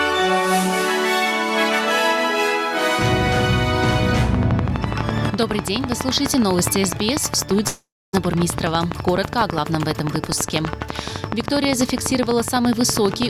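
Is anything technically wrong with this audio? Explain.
Yes, there are two faults.

From 4.35 s to the end, a train of clicks ticks at a regular 12 per second, peaking well above the sound, likely interference or a faulty connection.

From 7.67 to 8.15 s, a likely long network dropout loses about 460 ms; the receiver stretches the last sound into a fading buzz, leaving 260 ms of silence before the audio resumes.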